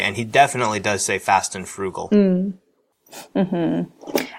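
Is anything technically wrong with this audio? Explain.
No, no technical faults.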